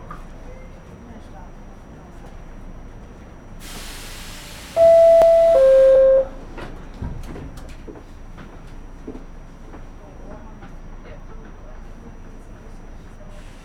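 From 1.2 s to about 13.2 s, periodic USB or driver dropouts recur every 2.0 s, roughly seven in all. Each time, something blocks the audio path and around a millisecond of the sound is skipped, producing a regular tick. On a waveform each shows as a tiny discontinuity; on a spectrogram, a thin vertical broadband line.

At 5.95 s, compressed frames are skipped. Roughly two frames, about 50 ms of audio, never play, and the sound jumps ahead. The 26.1 ms spacing fits 1152-sample frames at 44.1 kHz. Overlapping frames smear the join into a soft blip, seen as a slight discontinuity in the waveform and a brief blur in the spectrogram rather than a sharp vertical line.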